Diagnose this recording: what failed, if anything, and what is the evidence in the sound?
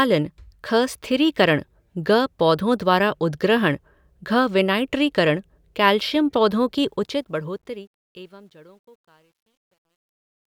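The fade-out's gain stage truncated without dither, which fits roughly 11-bit resolution. This produces truncation distortion from 6.86 s as the speech fades, turning gritty from 8.21 s to 10.49 s.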